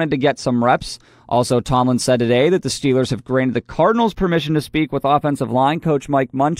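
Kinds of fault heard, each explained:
Channels drifting apart: The two channels run on clocks that disagree by roughly 30 parts per million. The gap between them slides through the speech. By the end it reaches only about a tenth of a millisecond. When the channels are summed to mono, that shifting offset cuts comb notches into the spectrum. The notches glide through the spectrum, with the lowest near 5 kHz by the close. The result is a slow flanging sweep on the voice.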